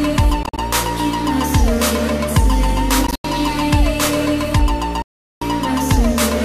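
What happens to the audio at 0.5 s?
Between 0.43 and 0.58 s the sound breaks up into short gaps, about 87 ms of silence scattered across 145 ms, the longest lasting about 44 ms, and it resumes as though it had played on. This is likely a Bluetooth dropout, where several packets did not reach the headphones in time and were dropped.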